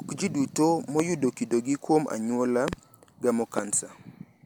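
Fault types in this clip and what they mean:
Loud pop: at 1.00 to 1.02 s just before "kido gi", a double pop at 2.68 to 2.75 s, and at 3.58 to 3.61 s right after "anyuola gamo", sharp pulses stand roughly 15 dB above the speech, the last nearer 20 dB, while the speech continues underneath. Each is likely a sudden voltage step or spike, from a plug, switch, static discharge or driver glitch, that the following circuitry shaped into an audible thump.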